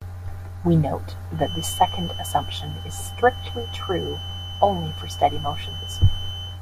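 From 1.32 s to the end there's a thin feedback whistle at 3 kHz, about 15 dB under the speech, likely a speaker-to-mic loop teetering at feedback.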